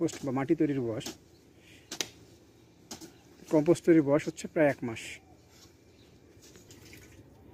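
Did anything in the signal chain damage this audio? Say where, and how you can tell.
No, nothing in the chain seems to have hurt this one, and there's nothing I can point to at any stage.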